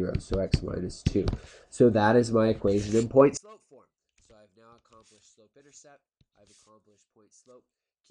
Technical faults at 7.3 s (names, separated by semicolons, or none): one channel inverted